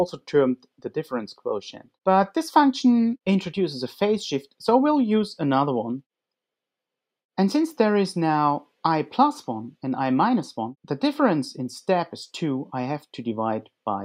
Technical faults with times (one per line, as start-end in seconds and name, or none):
0.56-0.91 sound cut by the noise suppressor
1.72-1.89 sound cut by the noise suppressor